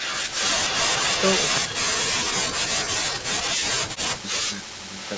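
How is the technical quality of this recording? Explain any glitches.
Quality takes a real hit from call-path problems: an echo that bleeds through and a long stretch where the talker gets ducked.

Echo leak: from the start to 1.57 s, and again from 4.97 s to the end, there's a delayed copy of the speech trailing about 279 ms behind. It's likely the far end's loudspeaker getting back into its mic without the echo canceller catching it all. Early on it's only slightly quieter than the direct speech; at the end it's much fainter.

Speech suppressed in double talk: between 1.59 s and 4.89 s the voice repeatedly sinks, for roughly three seconds in total, at worst by something like 35 dB. That's likely the echo canceller hearing both sides talk at once, failing to tell them apart, and turning everything down.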